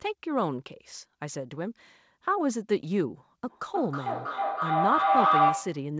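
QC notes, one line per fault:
3.43–5.93 s, feedback howl: a tone builds near 700 Hz, pulsing roughly every 300 ms and peaking about 5 dB above the speech, as a second device's loudspeaker feeds the microphone with gain above unity, so each pass grows and narrows to the loop's favoured frequency.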